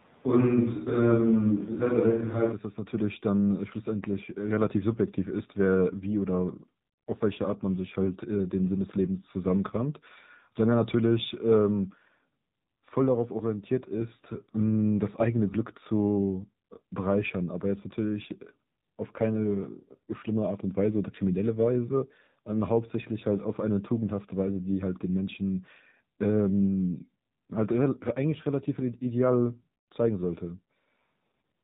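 A speech clip in which the opening runs from the start to 2.51 s with a roomy, hollow sound and thinner bass. That stretch points most likely to a switch to a distant microphone, with the level barely changing and faint room noise well below the speech. The change back to the closer sound at 2.51 s is sudden. The whole clip carries AMR narrowband mobile codec damage at 7.4 kbps. Nothing above 4 kHz survives, so the sound is muffled and telephone-like. The low bitrate's sparse pulse excitation makes the speech plainly buzzy and synthetic.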